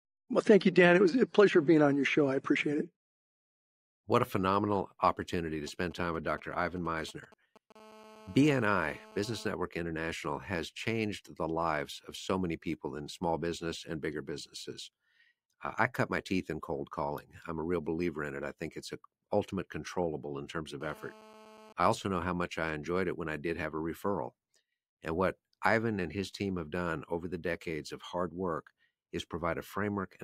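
Right after "a phenomenal opportunity to", from 5.67 to 7.72 s, GSM signalling bursts break in: a galloping dit-dit-dit of brief 217 Hz buzzes, roughly 25 dB below the speech, as a nearby 2G phone's radio pulses get rectified. A spectrogram shows clustered vertical stripes, and the waveform shows spiky packets.

From 7.76 to 9.47 s, and again from 20.81 to 21.73 s between "controllable in terms of" and "I also know how", a steady GSM phone buzz sits about 23 dB under the speech. It is a hard, raspy 217 Hz tone from continuous call-mode bursts, visible as a dense comb of harmonics and a regular pulse train in the waveform.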